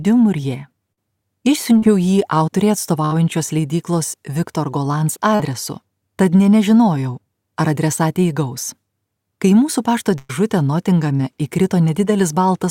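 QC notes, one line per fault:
0.92–0.98 s, 3.05–3.14 s and 10.18–10.30 s, burst of packet loss: the sound briefly stalls into a held, fading tone or hiss, then jumps ahead with a piece gone. About 50 ms is lost in each of the first two and about 110 ms in the third. The receiver stretched the last good audio across the hole, turning it down as the gap went on, and skipped past the missing stretch when packets resumed.
1.78–1.83 s, 5.35–5.40 s and 11.16–11.20 s, short concealed packet loss: each is a quick smear or wobble lasting a few hundredths of a second. About 40 ms is missing at the first two points and about 30 ms at the third. The decoder had no data for those moments, so it extended the preceding sound, either from its pitch or as shaped noise, and crossfaded back into the real signal, which hides the gap.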